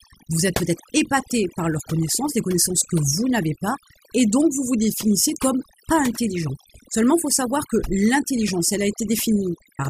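Across the whole clip the background falls to near silence broken by twinkling specks. This is overdone noise removal: a reduction stage set far too strong shuts off individual frequency bands near its noise estimate, taking quieter voice detail with them.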